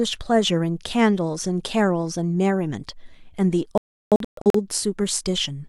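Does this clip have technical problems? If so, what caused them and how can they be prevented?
Yes. A digital broadcast dropout between 3.78 and 4.60 s: the receiver muted during corrupted reception, leaving holes totalling about 0.6 s, the longest 0.34 s. Unlike a loose-cable crackle, the sound falls cleanly silent and resumes further on. A stronger, better-aimed antenna prevents it.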